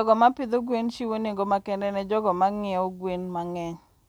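No technical faults can be heard anywhere in the recording, and the signal stays steady and intact throughout.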